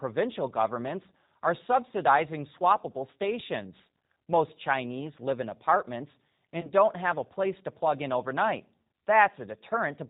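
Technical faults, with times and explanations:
Throughout: G.729 codec. The speech sounds plainly rough and slightly synthetic, with a dull, band-limited quality and nothing audible above 4 kHz. The decoder rebuilds each 10 ms frame from a vocal tract filter, a pitch predictor and a handful of pulses rather than the original waveform, which fits the 8 kbit/s G.729A variant. That sparse excitation gives the voice its buzzy, processed texture, and any background noise takes on a warble.
6.61 to 6.73 s: VoIP packet loss concealed by the speech codec. For a moment the voice smears into a short buzzy tone or coloured noise that weakens, then takes a little while to regain full strength and clarity. About 20 ms of audio went missing, consistent with a single lost packet. The decoder filled the gap by repeating its last pitch and filter settings at falling gain. Because each frame builds on the one before, the damage carries on for roughly 120 ms, well past the gap itself.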